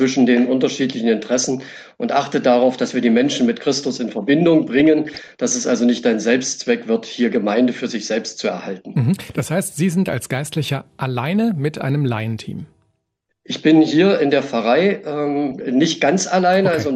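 MP2 compression runs through the whole clip: the sound is dull and carries a gurgling, granular roughness, which is likely MPEG Layer II coding at a low rate, fitting around 80 kbps, where upper sub-bands get switched off and the remaining ones are coarsely quantised.

DAB burbling breaks in from 4.80 to 5.29 s and again from 15.51 to 15.62 s. Bit errors, at a rate of a few tenths of a percent, slip past error correction and corrupt samples, so single sub-bands carry short blips of noise.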